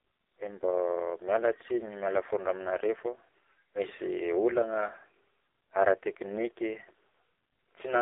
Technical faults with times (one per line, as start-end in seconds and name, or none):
0.00-8.02 AMR narrowband mobile codec